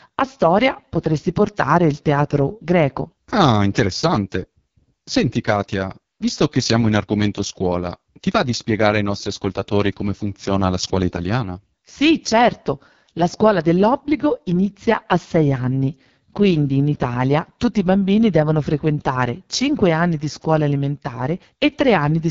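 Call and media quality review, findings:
AMR wideband (HD Voice) codec, whole clip: rough, raspy speech, nothing above 7.3 kHz. The heavy damage points to the lowest AMR-WB rate, around 6.6 kbit/s, starving the vocal tract model.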